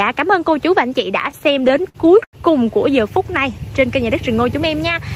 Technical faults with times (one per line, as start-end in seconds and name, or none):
1.31-2.35 repeated stalls (stutter)